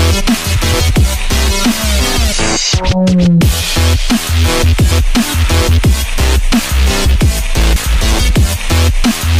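At 2.32 s the audio lurches forward, losing about a third of a second, and at 7.76 s a similar jump drops roughly a fifth of a second. These are compressed frames skipped: runs of frames, each 32 ms long, never reach the output, likely because they were missing or rejected as damaged.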